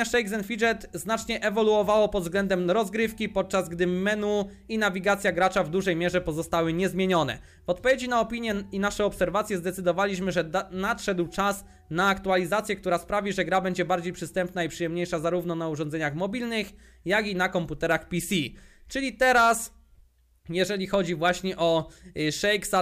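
No technical faults can be heard anywhere in it.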